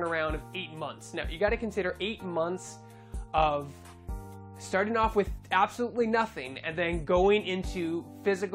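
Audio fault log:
No technical problems can be heard anywhere in the signal, from the opening moment to the final one.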